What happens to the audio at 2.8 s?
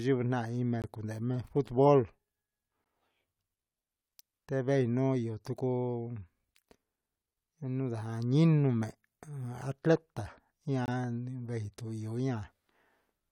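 At 2.84 s the speech drops out for about 14 ms, a short hole of silence with hard edges. It's a gap between stream segments: the time stamps at the boundary of 2-second segments don't quite meet, and the player fills the missing span with silence rather than losing audio.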